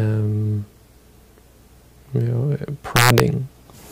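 Integer overflow hits from 2.96 to 3.20 s. Peaks driven about 3 dB past the limit wrap to the opposite sign, producing violent cracks far harsher than clipping.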